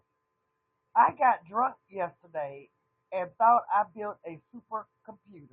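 A speech recording with no technical faults to report.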